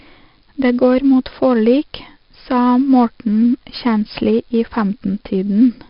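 Speech runs through 4-bit ADPCM compression for its full length. The coarse 4-bit prediction steps leave a gritty hiss that rises and falls with the speech, and consonant onsets smear where the adaptive step cannot keep up. The damage is heavy. Nothing is present above 5.3 kHz, which points to a sample rate near 11 kHz and fits a rate of about 44 kbps. A spectrogram shows a hard ceiling at 5.3 kHz and a noise floor that tracks each syllable's loudness, and the waveform looks grainy, with ragged attacks.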